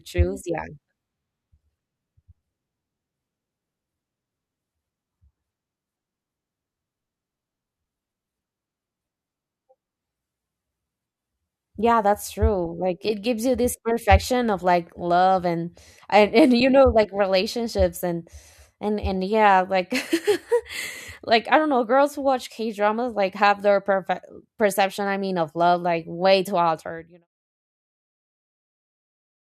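There are no technical faults to describe; the smooth fade-out from around 26.5 s to 27.28 s is ordinary editing.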